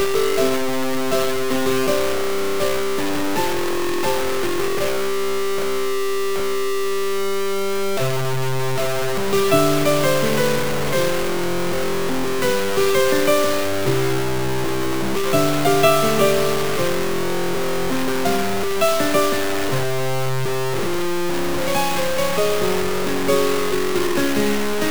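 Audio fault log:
throughout low bit depth without dither: coarse grainy distortion tracks the sound, and quiet passages sputter or drop out, likely from truncation to about 4 bits. The waveform shows blocky stair-steps, and the spectrogram shows broadband hash only slightly below the signal.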